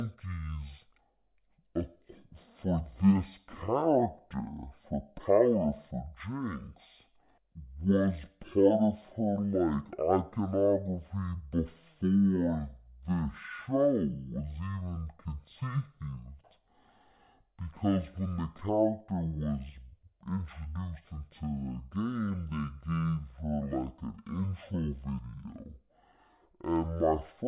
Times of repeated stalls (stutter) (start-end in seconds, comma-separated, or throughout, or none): none